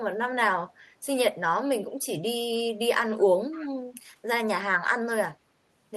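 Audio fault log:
3.51–3.69 s, echo leak: a faint, delayed copy of the speech trails about 304 ms behind, roughly 20 dB down, likely from a far-end loudspeaker the echo canceller missed.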